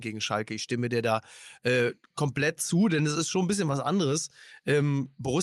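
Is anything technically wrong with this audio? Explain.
No, nothing technically wrong here.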